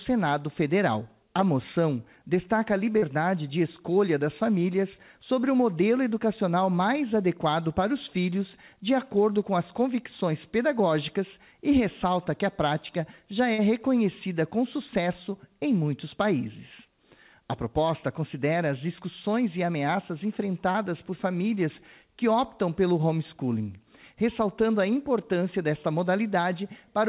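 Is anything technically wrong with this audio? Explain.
Yes. There is short concealed packet loss at 2.98–3.04 s, 13.54–13.60 s and 20.72–20.76 s. At these points, about 40, 40 and 20 ms of audio arrived too late. The receiver filled each gap by extending the preceding sound, which is heard as a brief smear or wobble. Throughout the clip, nothing above 4 kHz comes through, which fits a narrowband call codec.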